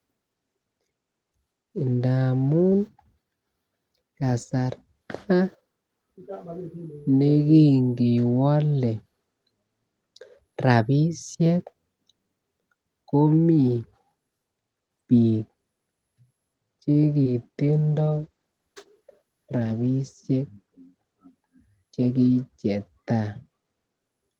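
At 16.91 to 16.97 s, a short stall from a late packet holds the speech for about 34 ms while the jitter buffer waits. Nothing is lost, but the sound drags slightly. At 17.23 to 17.27 s, short concealed packet loss replaces about 20 ms of missing audio with extrapolated signal, heard as a brief smear. From 17.63 to 20.28 s, a call bitrate drop makes the speech rough and muffled for roughly 2.6 s, which fits the encoder falling from about 32 to 13 kbps.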